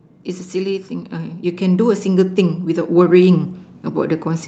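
The clip is speech carried over a call codec, with the top end stopping around 8 kHz. From 0.51 s to the end, automatic gain rising is heard. The gain control judged the input too quiet and kept raising its gain. Voice and background noise swell upward together, gradually, over several seconds rather than in a jump.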